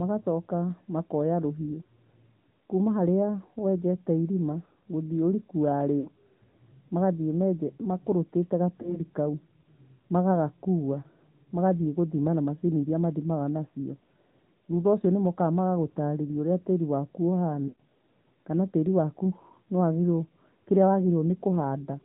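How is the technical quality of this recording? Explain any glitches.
The recording has plainly audible codec damage and three short dropouts.

The AMR narrowband mobile codec colours the whole clip. Nothing above 4 kHz survives, so the speech sounds muffled. A sparse pulse-driven vocal tract model rebuilds it at a rate that fits roughly the 10.2 kbps mode. That leaves a buzzy, synthetic edge.

Lost AMR speech frames cause the glitches. They occur at 6.00 to 6.08 s, 8.82 to 9.00 s and 17.68 to 17.80 s. The decoder repeats the last good pitch and vocal settings at falling gain. The first two are brief dips or warbles, fitting one or two lost frames. The third fits about 120 ms of lost audio, so the sound smears and fades away.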